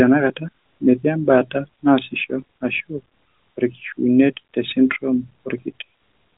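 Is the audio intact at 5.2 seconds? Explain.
Yes, the audio is intact at 5.2 seconds, with the speech carried cleanly through the narrowband mobile path, whose band stops at about 3.8 kHz.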